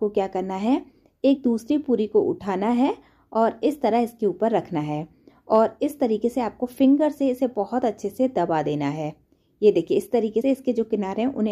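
The audio has compressed frames skipped at 1.35–1.37 s and 10.40–10.42 s. It jumps ahead by roughly a frame, then two, which fits a 23.2 ms frame length.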